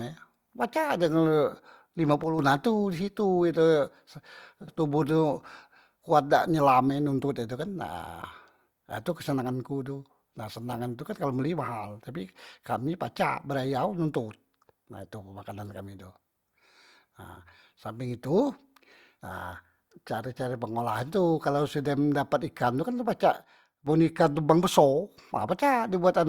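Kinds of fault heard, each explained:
Sudden gain jump: The speech and its background noise drop together in a single step, by about 6 dB from 2.24 to 2.39 s, just before "ha tu di", and by about 8 dB from 23.37 to 23.87 s, then return to their earlier level. Because the noise floor moves in lockstep with the speech, this is likely a digital gain change applied from one sample to the next without any ramp.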